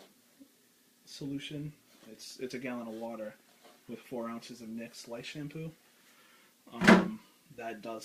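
No audible technical faults present.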